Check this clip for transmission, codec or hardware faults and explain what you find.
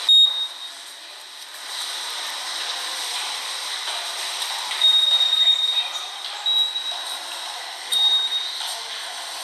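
No faults are audible.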